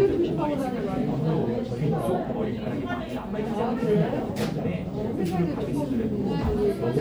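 Nothing stood out on listening to this recording of sounds.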